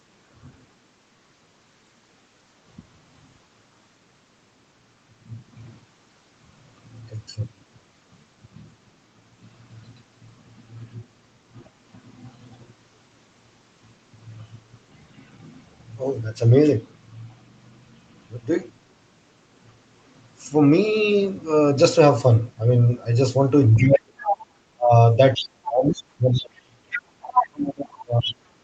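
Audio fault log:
23.75–24.46 s and 25.34–28.34 s, other side's voice leaking through: a second voice sits under the talker. In the first stretch it is close in level, about 5 dB below. In the second it runs longer and is quieter, about 10 dB below. This is likely far-end audio from a loudspeaker reaching the microphone and getting past the echo canceller. The leftover rides inside the same 8 kHz call band as the talker's own signal.
23.79–24.15 s and 24.76 s to the end, speech suppressed in double talk: the talker's level drops sharply, by about 35 dB at its deepest. It first dips for roughly 0.4 s, then drops again for a long stretch that lasts to the end of the clip. Both sides are talking at once here, and the canceller likely could not separate near speech from echo. It turned the signal down hard, cutting into the talker while the other side comes through.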